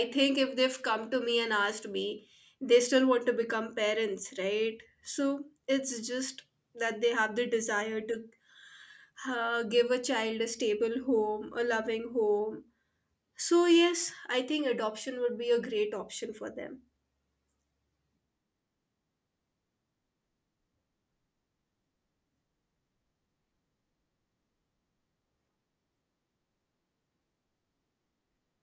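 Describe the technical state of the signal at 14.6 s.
At 14.6 s the speech signal is intact, with no audible fault at that moment.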